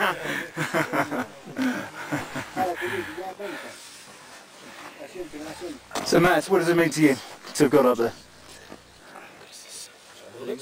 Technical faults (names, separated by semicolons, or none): channel delay (comb filtering)